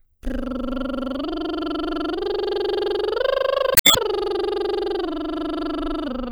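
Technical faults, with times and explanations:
3.73 to 3.97 s: damaged data in a compressed stream. The music is disrupted for about 0.24 s. Bad bytes in the encoded stream made the decoder misread frames and lose sync. It then hunted for the next valid frame header.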